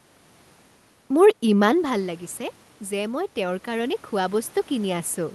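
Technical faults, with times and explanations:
2.88 to 5.35 s, automatic gain rising: the input fell by about 10 dB, so the gain control judged it too quiet and raised its gain gradually. Voice and room noise swell together over roughly two and a half seconds.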